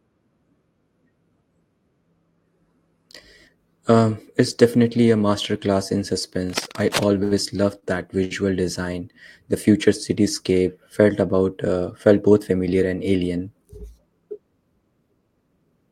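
Cable scratch noise from 6.49 to 7.08 s: rough, uneven scratching, about 10 dB below the speech, likely from a worn cable or connector being moved.

Short stalls from late packets at 7.23 to 7.33 s, 7.79 to 7.84 s and 8.24 to 8.33 s: the receiver held the sound 79, 30 and 64 ms until delayed packets arrived, so nothing is lost.

Jitter buffer speed-up from 12.23 to 12.59 s: to cut the delay, the receiver trimmed about 50 ms of pitch periods, so the speech runs 111% fast at the same pitch and sounds hurried.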